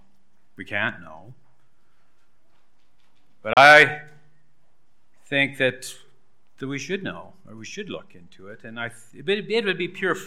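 A digital broadcast dropout mutes the audio from 3.53 to 3.57 s: a 3 ms fade into a 32 ms silence, consistent with one corrupted frame, and the programme resumes later rather than concealing the gap.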